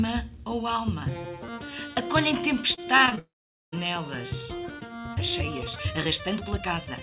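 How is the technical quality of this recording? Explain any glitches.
The recording has three distinct glitches from 2.74 s onward, all heard through a band-limited call path with nothing above 4 kHz, which fits a G.711 mu-law call codec.

From 2.74 to 3.19 s there is repeated packet loss with a robotic sound. Short holes, the longest about 33 ms, are patched by repeating the last sound, so roughly a quarter of this stretch is concealed. The result is choppy and robotic. On a spectrogram it appears as smeared, repeated vertical slices with abrupt edges.

From 3.19 to 3.74 s the audio cuts out, most likely because of a long network dropout. The last sound briefly continues as a fading buzz or hiss, then about 0.46 s of near silence follows before the audio resumes with that portion missing. On the waveform this shows as a flat gap, and on a spectrogram as a blank band.

From 4.74 s to the end the pace suddenly jumps to 1.6 times normal speed while the pitch stays the same. 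That points to a likely time-stretched section, where software squeezed the audio by dropping short pieces. It sounds rushed, with compressed, tightly packed structures on a spectrogram.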